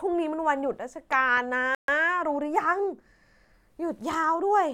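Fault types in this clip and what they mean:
Loud pop: Two sharp pops land between 1.13 and 1.39 s, well above the speech. They likely come from a sudden voltage pulse, such as static or a switch.
Bluetooth stall: The speech cuts to silence for 134 ms at 1.75 s, then resumes. This is likely delayed wireless packets letting the headphone buffer run dry.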